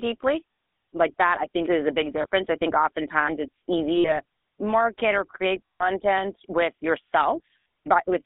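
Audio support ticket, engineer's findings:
GSM full-rate codec, entire clip: buzzy, gravelly speech at 13 kbps; the spectrogram shows a band of roughly 250 Hz to 3.6 kHz with nothing above. This is a pulse-excited vocal-tract model, and the damage is plainly audible.

Lost GSM frames at 0.52–0.58, 2.22–2.27, 3.96–4.21, 5.67–5.88 and 7.60–7.66 s: a rough metallic ring as the decoder repeats the last good frame's settings. On the spectrogram these spans show frozen, smeared harmonics.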